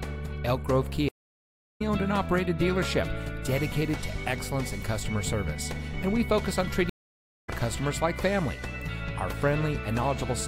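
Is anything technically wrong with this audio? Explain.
Yes. Twice, from 1.09 to 1.81 s and from 6.89 to 7.49 s, a stream reconnect occurs. The connection dropped and a fresh decoder restarted mid-stream, causing gaps of about 0.69 s and 0.56 s. Each time, the audio resumes later in the stream, roughly 0.7 s and half a second on.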